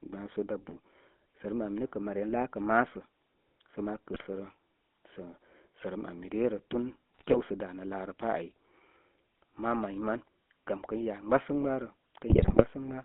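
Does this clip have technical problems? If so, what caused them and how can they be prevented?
Yes. The GSM full-rate codec runs through the whole clip: the speech has a buzzy, gravelly roughness, consistent with 13 kbps GSM coding of a regular-pulse excitation. A spectrogram shows energy confined to roughly 200 Hz to 3.5 kHz, with smeared, coarse harmonics. Prevent it by recording or transmitting over a wideband codec rather than a GSM voice channel.

GSM bit errors strike at 4.12–4.27 s, 7.14–7.37 s and 12.30–12.65 s. Corrupted filter, pitch and gain parameters reach the decoder, producing squawks, pops and gargling. The waveform shows sudden level bursts, and the spectrogram shows blotchy, misshapen frames. A stronger radio link or better error protection prevents this.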